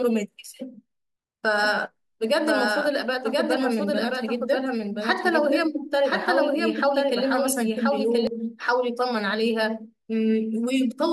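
From about 1.63 s to 8.27 s the speech has a doubled audio track. A second full-band copy trails the original by roughly a second, sitting around 5 dB quieter, with no decay or room colour on it, so it sounds like a dry overlapping echo rather than reverb. It switches on and off abruptly at those edges. The likely cause is the same audio being captured again through a slower path, or an edit leaving two copies out of step.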